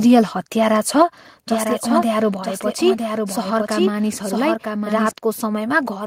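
It's a speech clip, and at 1.02 s the whole level drops by about 4 dB in one step, most likely the microphone volume stepped down by the call software. From 1.49 to 5.11 s there's a doubled audio track: a dry copy trails about a second behind, a few dB quieter, starting and stopping abruptly, probably a second, slower capture path being mixed in.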